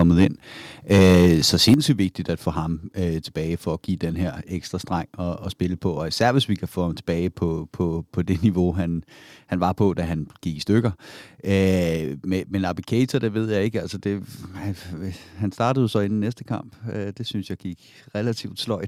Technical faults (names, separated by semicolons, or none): microphone overload; microphone volume stepped down